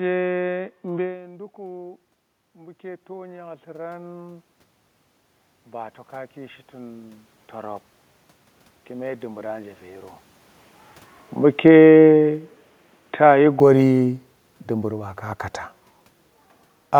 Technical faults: input switched to a poorer device; automatic gain rising; automatic gain falling

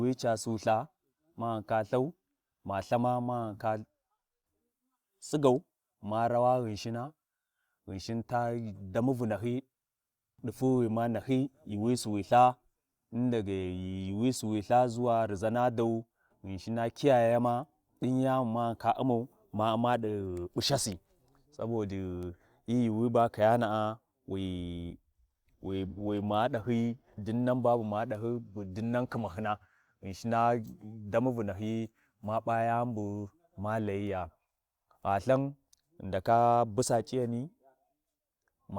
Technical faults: none

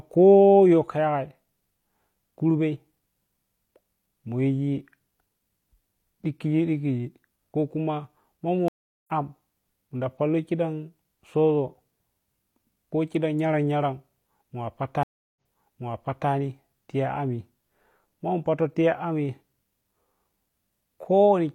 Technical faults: stream reconnect

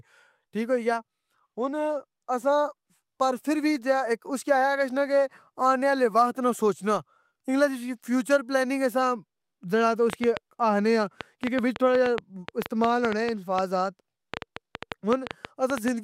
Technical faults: train of clicks

